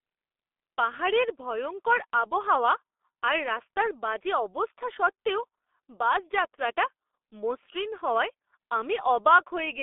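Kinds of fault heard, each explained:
G.723.1 codec: an early low-rate telephony coder that squeezes the speech into 30 ms frames at 6.3 kbit/s, refreshing its model of the vocal tract only slowly. Here the speech is heavily damaged, sounding muffled and hoarse, with consonants smeared together. On a spectrogram, energy sits in a telephone band of roughly 300 Hz to 3.5 kHz with nothing above 3.6 kHz, and the harmonics look coarse and blocky from frame to frame.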